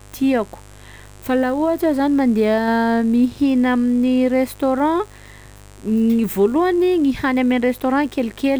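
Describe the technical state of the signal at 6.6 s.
A steady, raspy mains buzz sits under the speech at 6.6 s, as it does throughout the clip, roughly 25 dB below the signal. Switching spikes twice per 50 Hz mains cycle leak in, spreading harmonics of 50 Hz up into several kHz.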